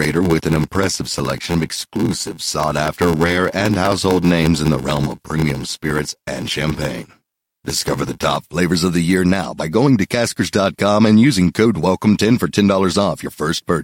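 Speech, with a block size mismatch (padded) from the start to 8.36 s, ending just before "flavors of the year". Each incoming block is shorter than the block the next stage reads, and the gap is zero-filled. That silence once per block produces an 86.1 Hz buzz, which fits a 512-sample read. The audio also runs slower, at 0.861 times normal speed, while the timbre stays.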